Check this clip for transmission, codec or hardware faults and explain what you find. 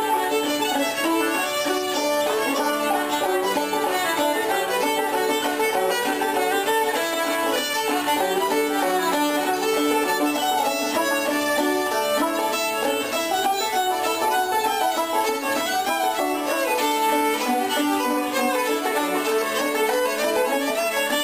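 One fault is audible: a single click at 14.15 s, likely caused by dropped samples. A fraction of a millisecond of the stream appears to be missing, so the waveform jumps abruptly to a later value. Nothing audible is removed, but the discontinuity produces one sharp tick and a thin vertical line across the spectrum.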